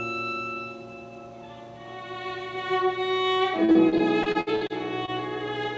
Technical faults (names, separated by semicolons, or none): repeated packet loss (robotic sound)